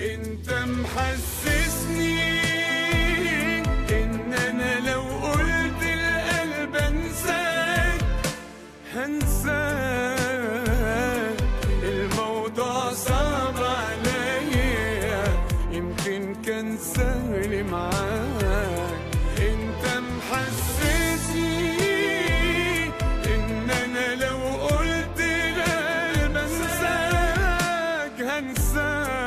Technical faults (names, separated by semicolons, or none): none